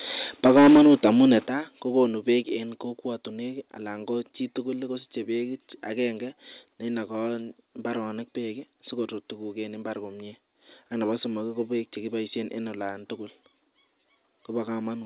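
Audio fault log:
0.45–1.32 s, microphone overload: For just under a second the loudest syllables get a harsh, crackly edge, as if the tops of the waveform are being shaved flat. The input was likely set about 8 dB hotter than the converter could take, so a noticeable share of the peaks slam into the ceiling and get clipped. Since the call path passes nothing above 4 kHz, the grit sits in the midrange rather than fizzing up top.
0.47 s, 1.47 s and 2.49 s, microphone volume stepped down: Three sudden drops in level, taking the voice and the room sound down together. They go by about 4 dB, then about 8 dB, then about 2 dB. The first lands right inside the clipped stretch, which points to the call software likely reacting to the overload by turning the device input down in single steps, and then trimming it twice more over the next two seconds.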